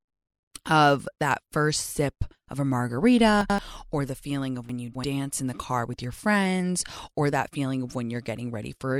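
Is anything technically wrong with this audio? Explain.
Yes. Chunks out of order appear twice, at 3.41 to 3.58 s and at 4.69 to 5.04 s. Chunks of about 85 ms arrive late and play after the material that should follow them: one chunk late in the first case and three in the second. Nothing is missing, but the speech is briefly jumbled, and each misplaced piece leaves three hard joins. The second event runs longer.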